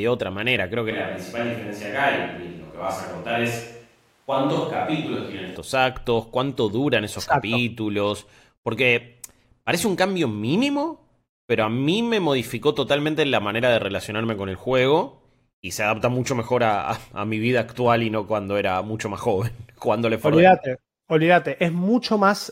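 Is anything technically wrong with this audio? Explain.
Yes. From 0.91 to 5.56 s the speech abruptly turns hollow, roomy and bass-light at a similar level, likely from a switch to a distant microphone that picks up more room.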